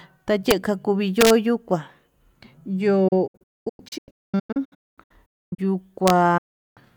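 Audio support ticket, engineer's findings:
Integer overflow at 0.51 s, 1.21 to 1.30 s and 6.08 to 6.10 s. Harsh cracks on speech peaks, sharper than clipping. Probable component: fixed-point gain or mix stage with no saturation. Peaks pushed about 1 dB past full scale (about 0 dB at 6.08 s) wrap to the opposite sign instead of being limited.

Digital broadcast dropout from 3.08 to 5.59 s. Speech breaks into repeated short holes across about 2.5 s, roughly 1.57 s lost in total, longest gap 256 ms, each with an 8 ms fade to silence. Pattern fits 32 ms frames failing checksum and receiver muting. Second dropout 6.38 to 6.78 s, 384 ms muted, same fade. Content in gaps unrecoverable.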